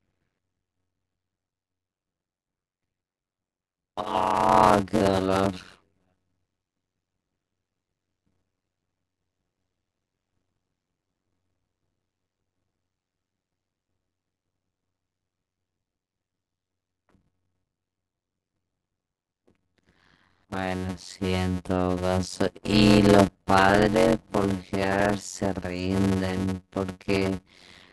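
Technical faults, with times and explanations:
Throughout: block size mismatch (padded). Each short block of speech is followed by a stretch of zeros, so a 91.9 Hz buzz rides under everything and the speech runs at 0.533 times normal speed, which fits 256-sample blocks written into reads nearly twice that size. Unlike a sample-rate error, the pitch stays about normal despite the slowing, and unlike dropouts, the gaps repeat evenly at the block rate.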